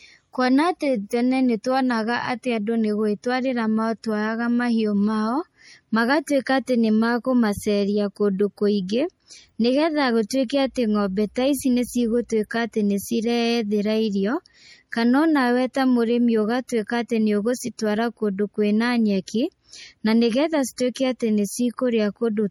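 Throughout, the speech has a watery, swirling texture with chirpy sibilants and smeared onsets, likely MP3 compression at a bitrate around 48 kbps, dropping weak spectral lines frame to frame.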